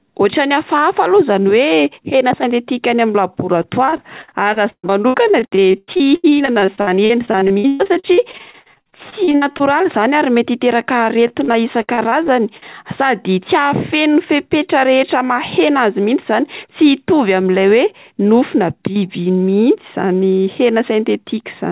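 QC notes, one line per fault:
3.62–9.62 s, repeated packet loss (robotic sound): choppy sound with pieces missing, ending just before "zany ary mety hiteraka". Dozens of short holes, the longest about 135 ms, add up to roughly 1.9 s. Each is patched by stretching the last sound, so about 31% of the stretch is concealed. That smeared patching gives the robotic tone.
11.28–12.70 s, repeated packet loss (robotic sound): starting right after "zany ary mety hiteraka", a shorter run of the same choppy concealment. About ten brief holes, the longest about 59 ms, total roughly 0.26 s, or 18% of the span, each filled by repeating the previous sound through the narrowband G.711 call path, which carries nothing above 4 kHz.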